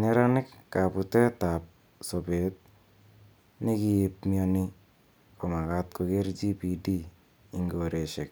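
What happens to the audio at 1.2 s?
Nothing goes wrong at 1.2 s: the speech continues cleanly through that moment with no dropout, click, distortion or other technical fault.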